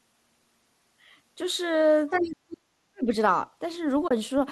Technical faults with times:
2.10-2.58 other side's voice leaking through
2.30-2.41 speech suppressed in double talk
2.67-3.09 speech suppressed in double talk
4.08-4.11 AAC frame loss with muting

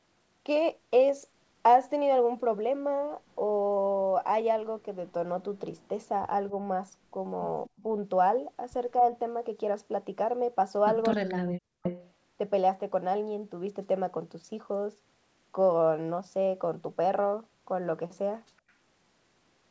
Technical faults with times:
3.29-3.35 echo leak
5.80-5.88 echo leak
7.65-7.83 echo leak
11.10-11.34 echo leak
11.19-11.85 speech suppressed in double talk
11.83-12.10 echo leak
18.69-18.73 echo leak

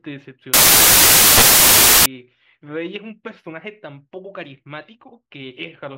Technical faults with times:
0.54-2.06 samples built from the wrong bytes

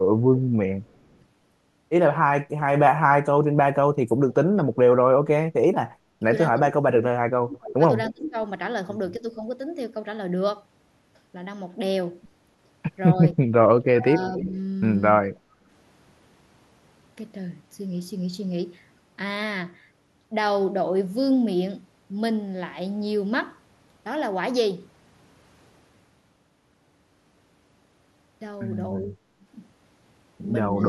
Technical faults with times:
0.38-1.17 echo leak
0.40-0.45 speech suppressed in double talk
3.77-4.70 speech suppressed in double talk
5.86-9.44 speech suppressed in double talk
8.07-8.11 echo leak
13.16-15.42 speech suppressed in double talk
14.20-14.54 echo leak
29.08-29.20 speech suppressed in double talk

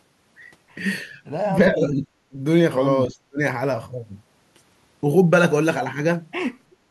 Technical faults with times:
1.70-2.02 speech suppressed in double talk
2.29-2.37 speech suppressed in double talk
3.08-3.39 speech suppressed in double talk

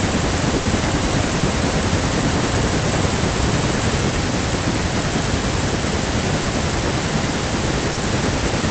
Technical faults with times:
0.55-0.67 burst of packet loss
1.39-1.43 short concealed packet loss
6.43-6.47 short concealed packet loss
7.93-7.99 short concealed packet loss

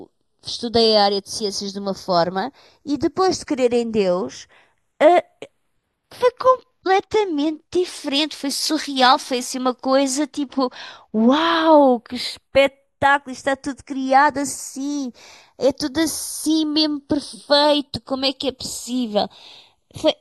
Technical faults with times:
0.00-20.20 channels drifting apart

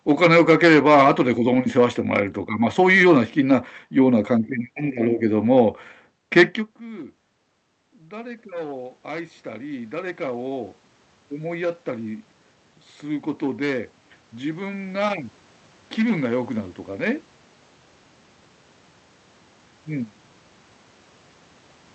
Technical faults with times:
7.78-15.13 automatic gain rising

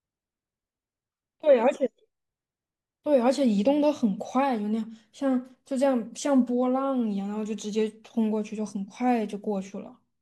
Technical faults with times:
none

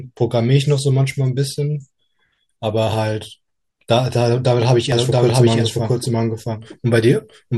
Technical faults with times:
4.92-7.58 doubled audio track

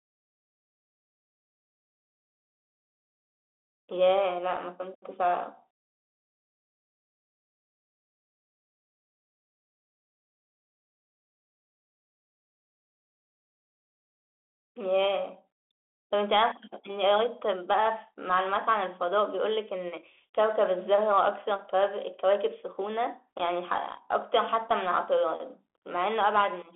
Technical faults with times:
0.00-26.75 Bluetooth CVSD headset codec

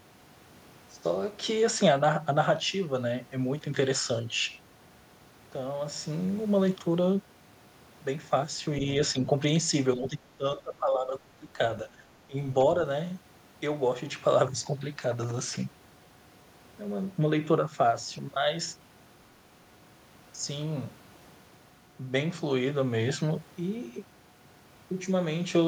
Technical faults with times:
9.96-11.49 speech suppressed in double talk
11.84-12.01 speech suppressed in double talk
12.27-12.37 speech suppressed in double talk

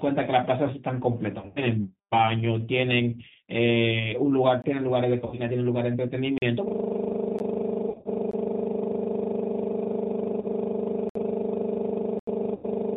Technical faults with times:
0.00-12.96 G.729 codec
1.39-1.64 VoIP packet loss concealed by the speech codec
4.62 block of digital silence
5.26-5.44 VoIP packet loss concealed by the speech codec
6.38-6.42 block of digital silence
7.39 block of digital silence
7.89-8.08 VoIP packet loss concealed by the speech codec
8.31 block of digital silence
10.41-10.45 VoIP packet loss concealed by the speech codec
11.09-11.15 block of digital silence
12.19-12.27 block of digital silence
12.55-12.66 VoIP packet loss concealed by the speech codec

